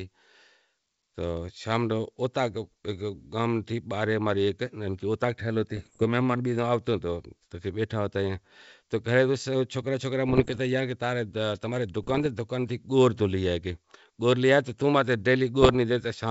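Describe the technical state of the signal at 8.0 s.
At 8.0 s the speech is intact, carried cleanly through G.722 wideband coding at 64 kbit/s with no audible fault.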